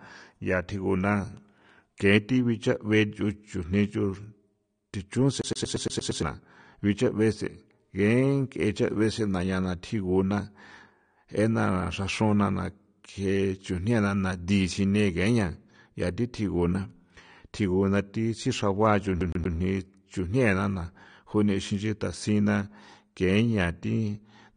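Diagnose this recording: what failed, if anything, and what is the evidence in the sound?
At the codec stage, the speech has a hard ceiling at 9.7 kHz, with nothing above it, and a dull, smeared quality with plainly audible coding damage, such as warbling and fizz on sibilants, across the whole clip. This likely comes from AAC compression, with AAC-LC run at a low rate that fits roughly 32 kbps. The encoder lowered its bandwidth and quantised the remaining spectral lines coarsely, leaving gaps that smear over time.

At the playback stage, a CD stuck on one turn causes two stutters. From 5.41 to 6.23 s, the same 116 ms slice repeats seven times, and from 19.21 to 19.56 s it repeats three times. Each repeat has a brief mute at the jump. The fixed loop length and even rhythm point to a disc scratch. The pickup keeps jumping back one track at the same point on every turn and replays that spot until it finally gets past it.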